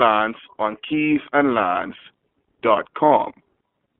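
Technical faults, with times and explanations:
Throughout, iLBC codec: speech is squeezed into a 250 Hz to 3.4 kHz band and sounds plainly rough and synthetic, consistent with 30 ms frames at 13.33 kbps.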